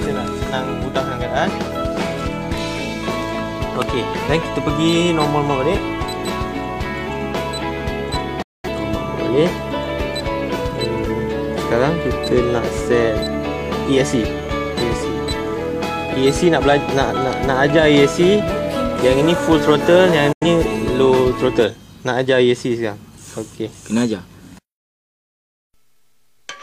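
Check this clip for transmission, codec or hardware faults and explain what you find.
Two digital broadcast dropouts are audible. The first runs from 8.42 to 8.69 s and the second from 20.32 to 20.47 s. In each, the receiver stopped getting valid frames and muted. The sound fades out over about 8 ms, leaves a short silent hole, then returns. The first gap fits about five lost frames, the second about two. Whatever was transmitted during each hole is gone.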